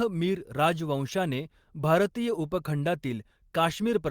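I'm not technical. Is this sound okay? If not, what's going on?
Yes, nothing in this recording points to a technical problem with the signal itself.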